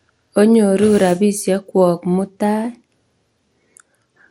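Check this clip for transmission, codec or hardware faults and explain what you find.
One fault runs through the whole speech clip. Throughout, the speech sounds dull and gurgling, likely from MP2 compression at a low rate, around 80 kbps, which starves sub-bands of bits. A spectrogram shows nothing above 16.6 kHz, with flickering, blocky upper bands.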